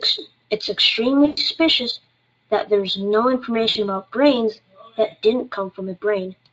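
Speech with two dropouts from VoIP packet loss concealed by the speech codec, at 1.25–1.40 s (about 120 ms lost) and 3.69–3.77 s (about 60 ms). The decoder stretches the last pitch into a fading buzz. On a spectrogram, frozen horizontal harmonics dim out; the waveform shows repeated decaying cycles under the lightly coded Speex sound.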